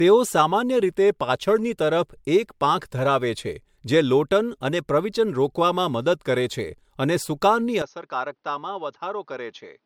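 From the start, the speech has a swirly, smeared, hollow quality, and consonant attacks blur. This points to generation loss. The audio was likely encoded with MP3 a few times over, at what sounds like 96 kbit/s. Each new pass added fresh quantisation noise and spectral holes.

At 7.82 s the sound turns dull and boxy, with no gap at the change. Nothing remains above 6.5 kHz. The level falls by about 10 dB. A new noise floor sits about 45 dB below the speech. The likely cause is an input switched to a poorer device, which persists to the end.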